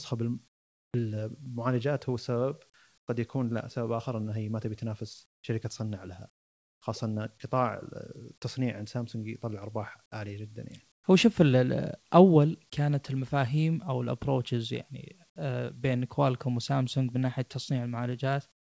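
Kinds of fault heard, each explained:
Comfort noise in place of the background: In pauses, the real background drops by about 15 to 22 dB to a steady, featureless hiss, likely from discontinuous transmission.
Short concealed packet loss: At 1.44 s, about 20 ms never arrived. The receiver extended the preceding sound to fill it, leaving a brief smear.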